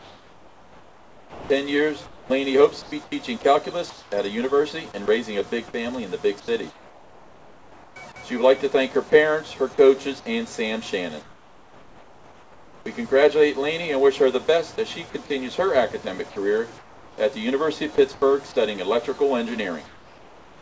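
From 0.0 to 4.12 s the sound is chopped by the voice detector. It cuts in and out. About 2.2 s of it is swapped for synthetic fill. The likely cause is a sender detector toggling transmission on and off.

At 5.06 s a 20 ms piece is dropped by the voice detector. It is a tiny gap filled with comfort noise. The sender likely judged that moment to be background. At 17.96 s the same thing happens again, for 20 ms.

Comfort noise replaces the background from 6.40 to 7.96 s. It happens again from 11.22 to 12.86 s, and from 16.78 to 18.22 s, where about 0.5 s is affected. The last stretch runs from 19.86 s to the end. In each pause the real background gives way to flat, featureless hiss. In the second and last stretches that fill sits about 6 dB lower than the real background. That background is itself about 26 to 27 dB below the loud parts. The likely cause is discontinuous transmission, with the receiver synthesizing noise in the gaps. 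The bandwidth stops at 8 kHz, which fits a 64 kbps G.722 call codec.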